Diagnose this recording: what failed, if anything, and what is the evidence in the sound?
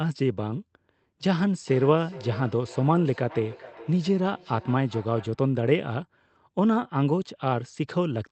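Feedback echo between two devices, from 1.62 s to 5.47 s, at the call-processing stage. The speech comes back roughly every 400 ms, peaking at about 19 dB below the direct signal, and each return sounds thinner and more ringing. Two devices in the same room share the call, and one plays the far microphone's audio back into it. Each echo canceller removes only its own playback, so the loop survives through the band-limited call path, which stops near 8 kHz.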